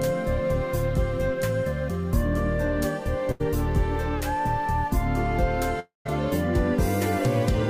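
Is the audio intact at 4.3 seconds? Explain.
Yes, the audio at 4.3 seconds is intact, with no dropout, click, distortion or other fault.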